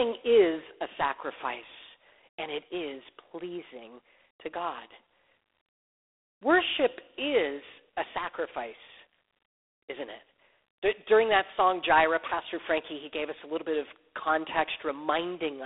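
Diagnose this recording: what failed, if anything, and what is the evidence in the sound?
The fault is at the codec stage: G.726 ADPCM coding runs throughout the speech. A harsh, rasping hiss tracks the speech level, which fits 24 kbit/s, where three bits per sample code the prediction error. The band spans 300 Hz to 3.6 kHz, with nothing above 3.8 kHz.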